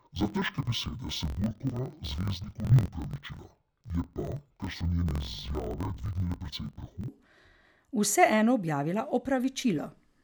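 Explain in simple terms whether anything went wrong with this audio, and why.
Interleaved audio read as planar, from 0 to 7.09 s: the speech drops an octave, sounds doubled and choppy. Alternating left-right samples were split as if stored by channel, so each 23.22 ms chunk, which fits 1024-sample blocks, plays two half-speed copies together.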